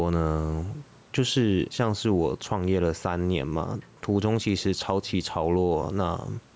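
Speech runs throughout with gain pumping: the room background swells by roughly 5 dB in each pause and ducks under every loud syllable, most likely from gain set too high and a fast limiter clamping down. On a waveform the envelope looks flattened and squashed, with the noise floor visibly rising between phrases. A spectrogram shows the faint room noise, about 44 dB below the speech, brightening in the gaps, and an empty region above 8 kHz from the call's microphone processing.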